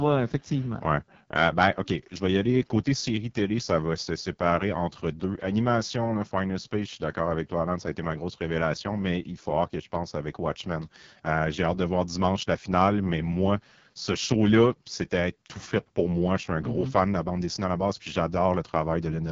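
From start to finish the speech runs through an AMR wideband (HD Voice) codec, and it's struggling: rough, raspy, buzzy texture, consistent with the lowest AMR-WB mode, around 6.6 kbit/s. The vocal tract model can't keep up at that rate, and nothing reaches above 7.4 kHz.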